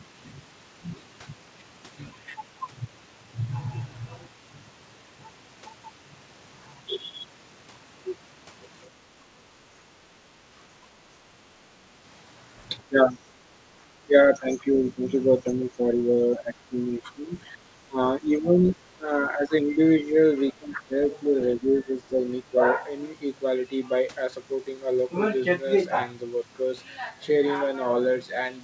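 Speech suppressed in double talk at 11.82–11.88 s, 12.89–13.32 s, 14.02–20.16 s, 20.52–20.94 s and 21.6–22.52 s: the level dips by roughly 10 to 20 dB in patches, likely because an echo canceller mistook overlapping talk for echo.

The other side's voice leaking through at 14.23–14.39 s, 14.74–14.81 s and 22.16 s: faint scraps of a second talker, roughly 20 to 35 dB down, likely left behind by incomplete echo cancellation. The whole clip stops at 8 kHz, which fits a 64 kbps G.722 call path.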